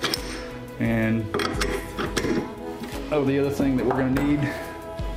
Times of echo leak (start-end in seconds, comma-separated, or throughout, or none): none